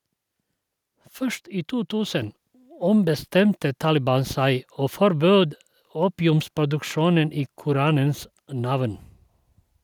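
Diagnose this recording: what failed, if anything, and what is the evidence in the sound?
The microphone volume stepped up at about 2.22 s, a fault in the call processing stage. The speech and the background noise beneath it jump together by about 4 dB in a single instant. The call software judged the input too quiet and raised the device's input volume in one step. A talker leaning toward the microphone would lift the voice but not the room noise. A smooth automatic gain ramp would rise gradually rather than as one abrupt step.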